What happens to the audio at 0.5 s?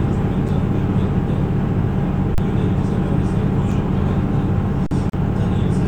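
The output buffer ran dry at 0.48 s, an underrun with held sample: the converter froze on its last value for about 5 ms. The waveform flattens, the sound briefly stops, and roughly 5 ms of audio is skipped.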